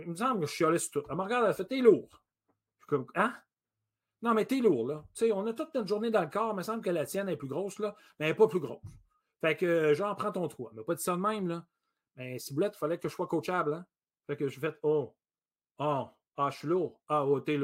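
A recording of speech, with no technical fault to point to anywhere in it. Nothing in the audio calls for a timestamp or a cause.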